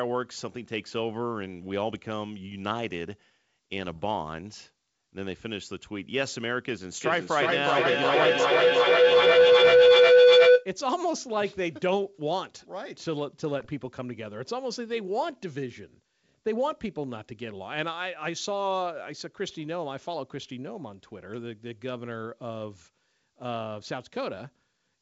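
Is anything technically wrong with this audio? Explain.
Yes. Between 3.83 and 3.97 s, and again from 13.60 to 13.69 s, there are bit errors on an ADPCM link. Flipped bits also upset the decoder's step size and predictor, so each leaves rough pops with jumpy level rather than a clean click. From 7.01 to 10.71 s there is feedback howl. A microphone-to-loudspeaker loop gains on every pass, building a tone near 500 Hz that pulses about every 400 ms and peaks about 13 dB above the speech. Unlike the brief bit-error bursts, it grows steadily and holds a single pitch.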